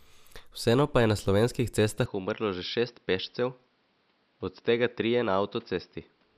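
At 2.06 s the recording likely switched its input to a poorer device, and the speech stays on that device through to the end. The new path passes nothing above 5.7 kHz, so the voice abruptly turns duller and boxier, and it drops in level by about 5 dB. A faint new background noise appears, sitting about 40 dB below the speech. The change happens with no gap, so the tone shifts mid-flow rather than after a pause.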